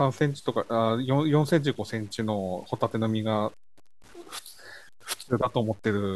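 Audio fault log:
throughout, low bit depth without dither: the speech carries a grainy, rasping distortion that rises and falls with the voice instead of sitting as a steady hiss, sitting roughly 30 dB below the signal. Quiet syllables and decaying endings turn gritty and sputter toward silence. The likely cause is samples truncated to a coarse grid, which fits 8-bit words, without dither, so the rounding error tracks the waveform and is heard as distortion rather than noise.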